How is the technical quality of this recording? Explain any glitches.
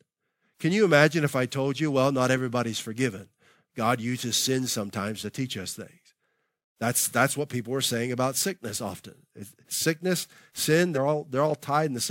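One glitch stands out: compressed frames skipped, from 10.94 to 10.98 s in the speech. About one 46.4 ms frame never plays, so the audio jumps ahead roughly 50 ms. A plain dropout would leave a silent gap, and a sample-level cut would give a hard click.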